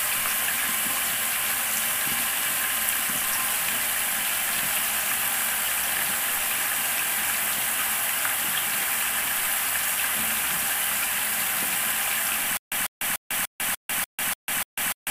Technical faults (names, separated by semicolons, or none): stutter with silent gaps